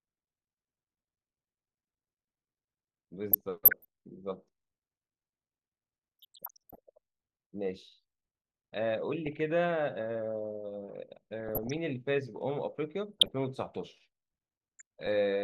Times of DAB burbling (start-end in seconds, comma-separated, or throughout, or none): 3.32-3.85, 6.19-6.77, 9.26-9.40, 11.39-11.77, 13.18-13.31, 14.79-15.13